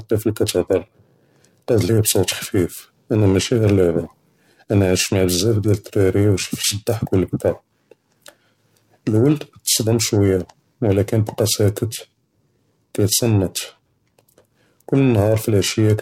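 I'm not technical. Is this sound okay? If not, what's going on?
No. Throughout the speech there is a rough, metallic buzz riding on the sound. It is harsher on the brighter, hissier parts and disappears in the pauses. This is periodic clock jitter. The timing signal that paces the recording equipment is being shaken by interference at roughly 1 kHz, so every part of the sound picks up extra tones just above and below itself, which the ear hears as that gritty edge.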